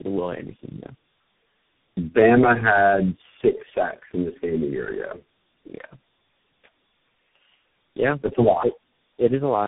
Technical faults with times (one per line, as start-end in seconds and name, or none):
0.00-9.68 tandem speech coding